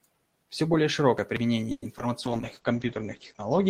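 At 1.71 s the sound stops moving forward for about 130 ms. The last sound is stretched into a fading buzz or hiss for about 110 ms, then about 10 ms of silence, before it resumes exactly where it left off. This is a call audio freeze, likely from packets held up in transit until the jitter buffer ran dry. Unlike packet loss, nothing is dropped; the delay simply grows by 110 ms.

Two short concealed packet losses follow back to back, from 1.98 to 2.01 s and from 2.01 to 2.04 s. In each, 20 ms of real audio never arrived and about 10 ms of continued sound covers the hole. The result is a quick smear or wobble with content actually missing, not merely delayed.

From 2.26 s to the end, a call bitrate drop takes the encoder from 32 to 10 kbps and narrows its bandwidth from 20 kHz to 8 kHz. The sound turns muffled and coarse and stays that way, a lasting change in tone rather than a momentary glitch.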